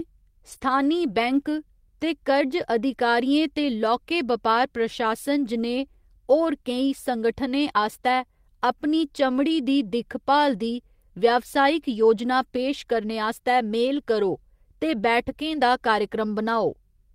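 Right at the start, from 0.49 to 0.55 s just before "बैंक दे", you get a lost packet rebuilt from error correction. The next packets carried low-bitrate copies, so there's no gap, just a rougher, noisier patch. The same thing recurs from 11.77 to 12.11 s, a longer stretch covering nine lost packets. It happens again at 13.87 s, between "पेश करने आस्तै" and "करो ते", and from 15.25 to 15.31 s after "करो ते".

Squeezed in at 0.57 to 0.61 s is a short concealed packet loss. About 20 ms never arrived, and the decoder extended the preceding sound to cover it, so you hear a brief smear or wobble there.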